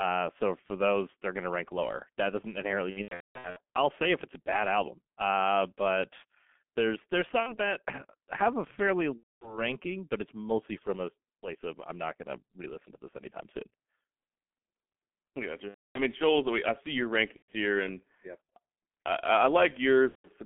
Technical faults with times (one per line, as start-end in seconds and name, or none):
0.00-20.45 G.723.1 codec
2.90-3.59 VoIP packet loss concealed by the speech codec
7.40-7.58 VoIP packet loss concealed by the speech codec
9.17-9.63 VoIP packet loss concealed by the speech codec
15.68-16.00 VoIP packet loss concealed by the speech codec
17.36-17.53 VoIP packet loss concealed by the speech codec
20.09-20.28 VoIP packet loss concealed by the speech codec